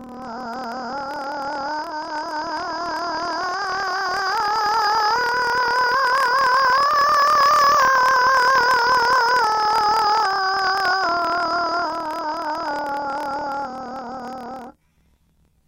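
From the first second to the end, the music has planar audio read as interleaved. Each stretch of about 26 ms of left samples followed by right samples gets read as alternating pairs, so every block plays twice at double speed. That pushes everything up a full octave, and the block switching adds a rough flutter at about 38 Hz. The overall tempo still sits where it should, since the two double-speed copies fill the original time.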